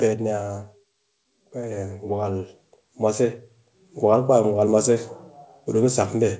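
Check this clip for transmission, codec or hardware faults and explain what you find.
One fault stands out: automatic gain rising. From 1.35 to 3.47 s, the gain control judged the input too quiet and lifted it by about 6 dB. Voice and background swell together, gradually. Through the call path, nothing reaches above 8 kHz, which fits a wideband call codec.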